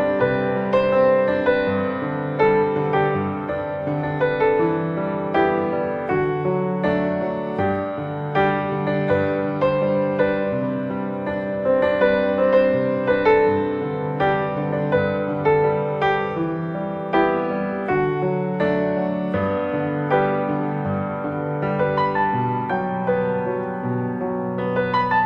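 No technical faults are audible.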